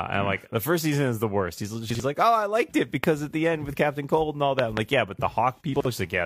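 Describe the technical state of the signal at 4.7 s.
A loud pop, two pops about 20 dB above the speech across 4.59–4.79 s, likely an added voltage pulse, appears as tall waveform spikes and vertical broadband spectrogram lines.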